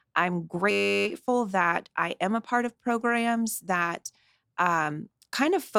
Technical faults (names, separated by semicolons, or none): system hang loop